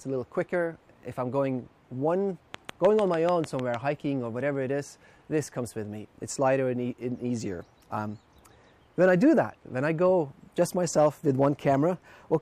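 From 2.54 to 3.75 s, a train of clicks ticks over the sound: around ten near-identical pops at a steady 6.67 per second, peaking roughly 10 dB above the audio. Their even spacing and matching shape, unlike random crackle, point to likely interference or a faulty connection.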